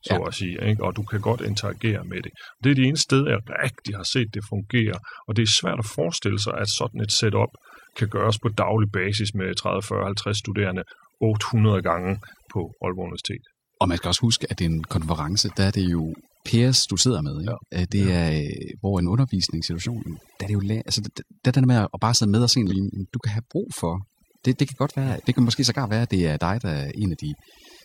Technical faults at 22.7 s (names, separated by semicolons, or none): overdone noise removal; damaged data in a compressed stream